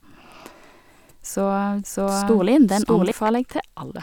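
From 1.83 s to 3.11 s the speech is heard twice at once, a second full-band copy trailing about 0.7 s behind at roughly equal loudness, dry and abruptly switched in and out: a doubled audio track, likely from a slower second capture path.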